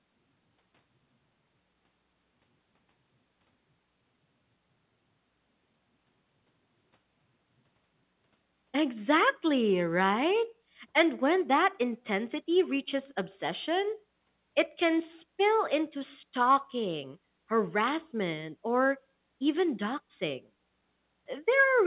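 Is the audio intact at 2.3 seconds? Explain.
Yes, the audio at 2.3 seconds is intact, with the speech passing cleanly through the WebRTC call path.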